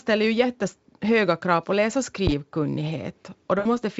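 At 2.27 s, right after "krav på läs och", a phantom power thump lands: a supply step on the live input passes the coupling capacitors as a deep thud decaying in about 22 ms. At 3.59 to 3.67 s, VoIP packet loss concealed by the speech codec stretches the speech into a buzzy tone or coloured noise that fades, across a gap of about 60 ms, which fits three lost 20 ms frames. The Speex coding underneath shows little or no damage at a rate near 34 kbps.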